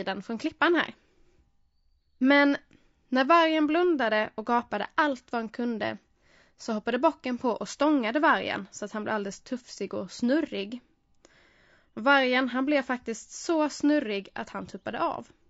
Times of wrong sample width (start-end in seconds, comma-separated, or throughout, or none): none